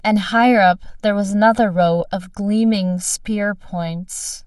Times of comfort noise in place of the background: none

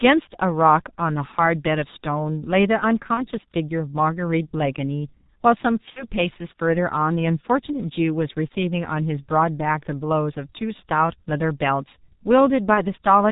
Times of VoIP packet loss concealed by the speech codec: 3.14-3.26, 5.90-6.06, 12.74-12.83

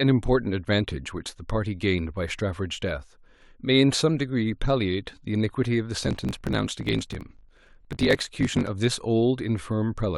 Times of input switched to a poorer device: none

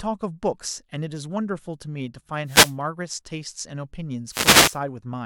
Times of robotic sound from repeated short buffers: none

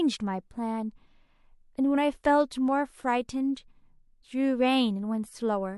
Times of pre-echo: 3.55

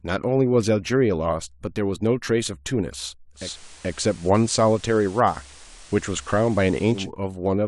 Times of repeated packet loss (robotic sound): none

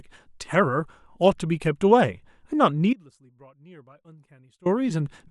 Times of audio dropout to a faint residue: 2.93-4.66

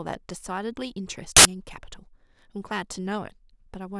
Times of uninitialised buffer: 1.37-1.45

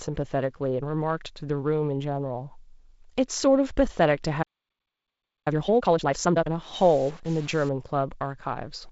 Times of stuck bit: 6.74-7.69

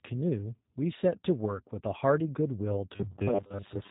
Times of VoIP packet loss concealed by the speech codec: 3.29-3.41

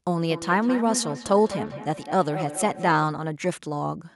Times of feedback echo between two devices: 0.30-3.12

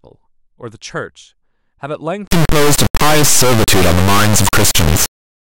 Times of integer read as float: 2.28-5.43

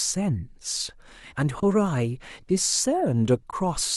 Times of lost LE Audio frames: none

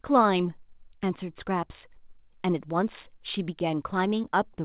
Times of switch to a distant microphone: none

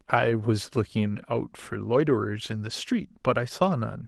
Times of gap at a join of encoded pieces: none

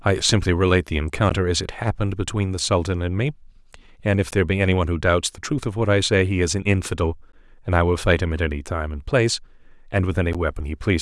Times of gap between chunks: 1.29, 4.31, 7.32, 10.33

